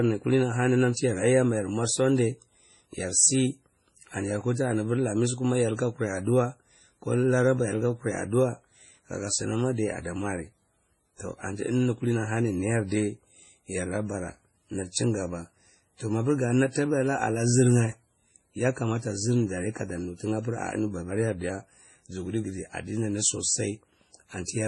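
Throughout the speech, nothing is present above 11.4 kHz, and two different sets of coding artefacts sit on top of each other. This is likely transcoding between lossy codecs: a low-bitrate WMA pass near 24 kbit/s re-encoded as MP3 around 32 kbit/s, compounding the artefacts.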